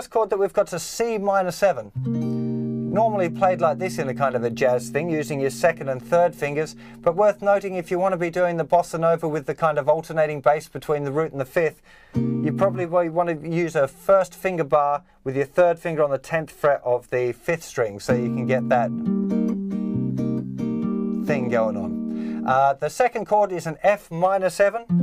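No technical faults can be heard anywhere in the recording, and the signal stays steady and intact throughout.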